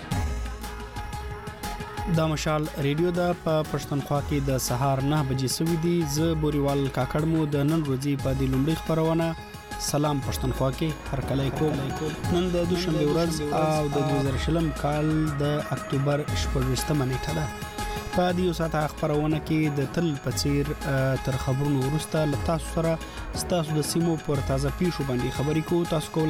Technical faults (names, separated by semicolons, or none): doubled audio track